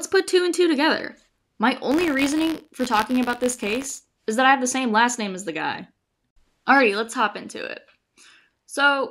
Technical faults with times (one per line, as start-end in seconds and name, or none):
1.90-4.00 buffer tearing